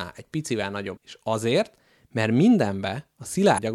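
A brief glitch at 0.96 s, just after "egy picivel", and another from 3.54 to 3.59 s: damaged data in a compressed stream, where corrupted frames make the decoder lose sync.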